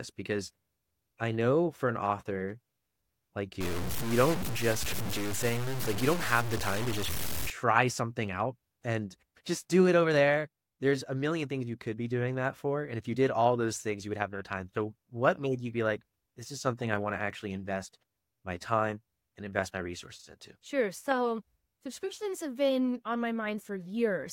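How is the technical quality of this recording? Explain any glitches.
The recording has one clear glitch, from 3.61 to 7.5 s, where the sound turns harsh and grainy. That section has the character of low bit depth without dither, likely from the audio being truncated to something near 5 bits. With so few levels, the rounding error tracks the signal and is nearly as loud as the sound itself. Quiet parts become gritty or sputter into silence. A waveform would show visible stair-steps, and a spectrogram would show broadband grit that rises and falls with the sound.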